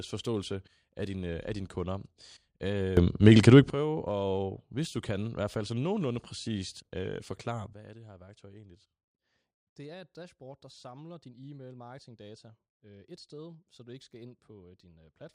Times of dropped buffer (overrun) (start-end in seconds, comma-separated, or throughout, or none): none